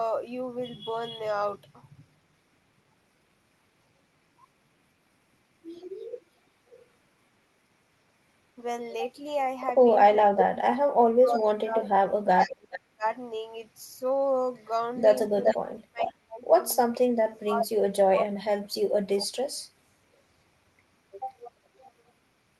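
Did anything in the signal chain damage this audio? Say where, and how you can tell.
Yes, in call processing. Echo leak: delayed copies at 6.71, 10.39, 12.72, 15.01 to 16.13 and 21.78 s, lagging by about 0.46 or 0.42 s. On a spectrogram the harmonics reappear shifted right, ranging from about 30 dB down to equal level, likely loudspeaker echo the canceller missed.

Speech suppressed in double talk: from 10.14 to 13.04 s and 15.58 to 19.3 s, the speech dips by up to roughly 35 dB, in pieces totalling about two seconds per stretch. The waveform envelope shows sudden notches and the spectrogram goes dark, likely from the canceller attenuating overlapping talk.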